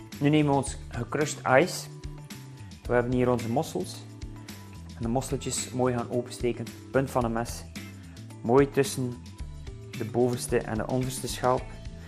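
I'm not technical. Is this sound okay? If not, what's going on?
No. The whole recording sounds dull and muffled, with a plainly audible gurgling, grainy roughness under everything. That is MP2 compression, most likely the cause here. The format splits the sound into many narrow frequency slices and shares out a limited budget of data among them. When the budget is tight, the highest slices are switched off and the rest are stored roughly, which removes the crispness and adds that watery texture.

There are also two moments of DAB burbling, heard as burbling blips of noise on top of the audio: a brief blip at 6.81 seconds, and a longer stretch from 10.40 to 10.77 seconds. This happens when a digital radio signal is weak and some corrupted data gets through the error correction. Wrong data then puts short bursts of noise into individual frequency slices, which makes those blips.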